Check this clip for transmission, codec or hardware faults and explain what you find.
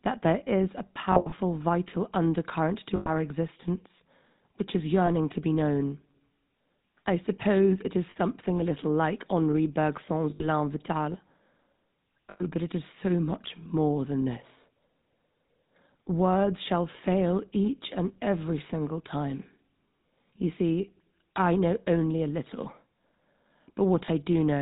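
Two faults are audible: a constant codec roughness and a series of brief dropouts.

The speech has a buzzy, gravelly texture from start to finish, with nothing above 4 kHz, so it sounds dull and telephone-like. This is the GSM full-rate codec, consistent with the 13 kbps full-rate coder. It builds each stretch of speech from a vocal-tract model excited by a sparse, regularly spaced pulse train that keeps only a third of the excitation detail. That coarse excitation causes the plainly audible grit.

Lost GSM frames occur at 1.12–1.32 s, 2.96–3.10 s, 5.06–5.09 s, 8.10–8.17 s, 10.30–10.45 s, 12.30–12.42 s and 24.06–24.09 s. Each one sounds like a brief metallic, ringing smear where the speech briefly freezes. The first is broken up, with losses scattered over 200 ms and runs of up to about 70 ms. The others last from about 30 ms to about 150 ms. The decoder fills each gap by repeating the last good frame's parameters, which fits 20 ms frames, and that produces the held, rough ring.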